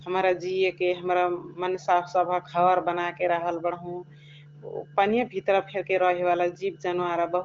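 Nothing stood out on listening to this speech.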